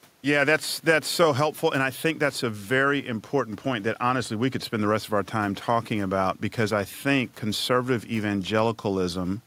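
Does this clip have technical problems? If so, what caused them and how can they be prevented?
No, this clip has no technical problems, so there is nothing to prevent.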